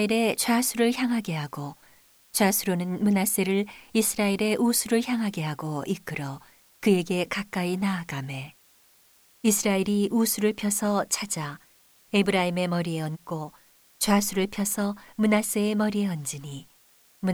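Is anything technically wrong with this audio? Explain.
Yes. Throughout the speech there is low bit depth with dither. The audio appears to be reduced to around 9 bits, with dither added before rounding, so the rounding error is spread into steady white noise around 35 dB below the speech. It sounds like a constant, even hiss. Without dither, the same reduction would cause gritty distortion that follows the speech and vanishes in silence. Here there is no distortion, and the hiss stays level through the pauses.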